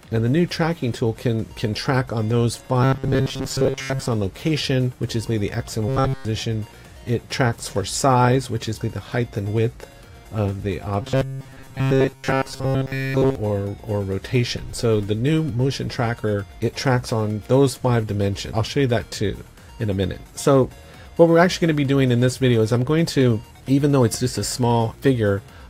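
The audio turns into a rigid, metallic buzz three times, from 2.83 to 4.06 s, 5.88 to 6.25 s and 11.02 to 13.35 s. This is robotic sound from repeated short buffers. The buzz sits at 134 Hz, which fits a chunk of about 7.5 ms being replayed. Most of the sound in the first and third spans is repeated chunks. The short middle span is repeated throughout. The likely cause is audio arriving too seldom, so the last chunk is looped.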